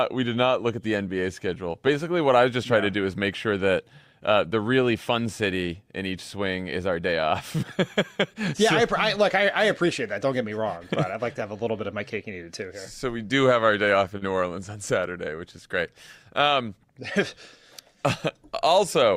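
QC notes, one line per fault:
14.17 to 14.23 s, short concealed packet loss: about 40 ms of audio never arrived in time, and the receiver covered the hole by extending the preceding sound for roughly 39 ms before blending back into the real signal. The result is a brief smeared, wobbly stretch rather than silence. That sets it apart from a plain dropout, which leaves an audible gap, and from a click, which is an instantaneous spike with nothing sustained.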